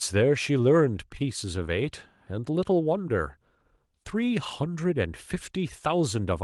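No technical faults can be heard anywhere in the speech recording. There is nothing to place on a timeline.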